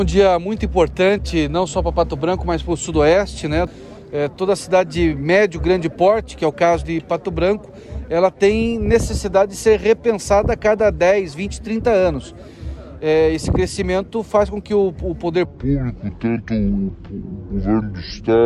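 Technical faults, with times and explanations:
15.45 to 18.46 s, section at the wrong speed: The last stretch plays at 0.625 times speed. It drags and sits about seven semitones lower. The likely cause is a mismatched playback clock.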